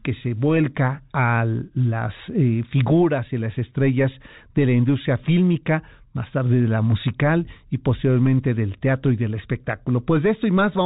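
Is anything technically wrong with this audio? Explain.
No, nothing is technically wrong with this audio.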